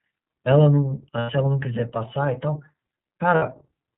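From start to finish the speech carries the sound of the iLBC codec. Everything above 4 kHz is gone, so the voice is narrowband and dull at the top. The codec damage is plainly audible. Each frame's excitation is coded on its own, which leaves a rough, slightly synthetic edge on the voice. The texture fits iLBC at 13.33 kbps with 30 ms frames.

At 1.2 s the lost iLBC frames begin. For about 90 ms, to 1.3 s, the decoder had no data. It repeated the last pitch cycle with added noise, so the gap sounds like a held, faintly buzzy vowel. That length fits three lost 30 ms frames. A second loss runs from 3.35 to 3.43 s, about 60 ms, with the same buzzy hold. After each gap the voice snaps back at once, because iLBC frames stand alone.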